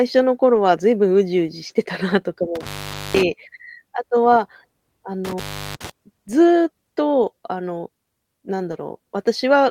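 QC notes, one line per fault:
0.55–0.57 s, 1.69–1.71 s, 2.91–2.93 s, 8.71–8.73 s: lost packet rebuilt from error correction. Each 20 ms frame was replayed from a low-bitrate redundant copy, so there is no gap but a brief rough, noisier patch.
1.67–1.71 s: short concealed packet loss. 20 ms never arrived; the decoder extrapolated the preceding sound and crossfaded back, giving a short smear or wobble.
2.55–3.22 s, 5.25–5.90 s: intermittent contact. A loose connection opened for about 0.48 s and 0.36 s, cutting the sound out with crackle at each edge and faint hiss in between.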